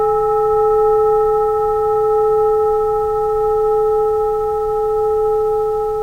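No faults are audible anywhere in the sound.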